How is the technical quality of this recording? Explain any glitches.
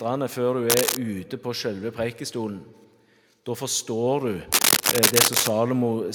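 Two bursts of cable scratch noise disturb the recording, at 0.69–0.97 s and 4.52–5.5 s. A worn cable or connector being moved likely made its contact resistance jump, adding ragged scratching and rustling: first about as loud as the sound itself, then noticeably louder.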